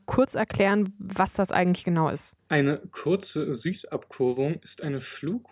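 No technical faults are audible.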